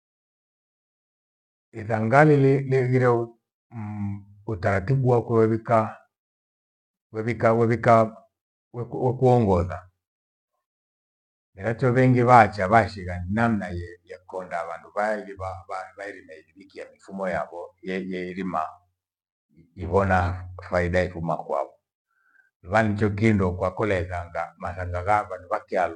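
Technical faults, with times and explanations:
No technical faults are present in this speech recording, so there are no times or explanations to give.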